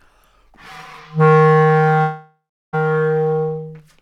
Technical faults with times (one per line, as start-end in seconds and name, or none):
2.01-2.75 long network dropout